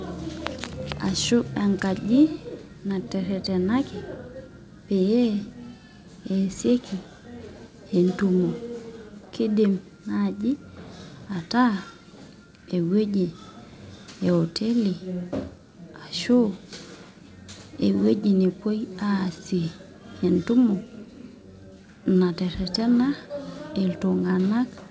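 No technical faults are audible.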